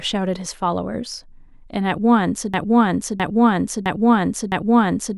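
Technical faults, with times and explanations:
2.54 s to end: broken-record loop, a 0.66 s fragment repeating exactly four times back to back, likely a stalled player replaying its last buffer while new audio is lost.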